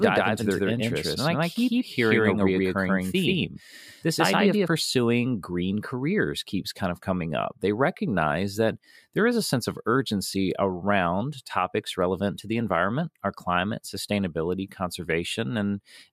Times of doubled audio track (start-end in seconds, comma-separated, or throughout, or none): 0.00-4.68